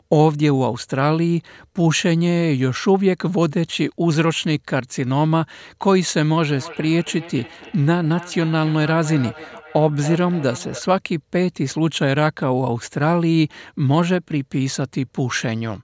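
A speech clip with a feedback echo between two devices from 6.49 to 10.87 s. Another device in the room plays the call back into a live microphone. Each word returns about every 300 ms, thinner and ringing. The loudest repeat sits about 16 dB below the speech.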